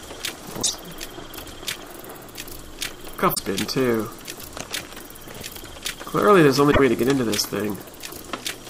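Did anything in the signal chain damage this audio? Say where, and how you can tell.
Yes: damaged data in a compressed stream at 0.59–0.70, 3.31–3.39 and 6.68–6.80 s. Brief glitches show the decoder misreading corrupted frames and resyncing.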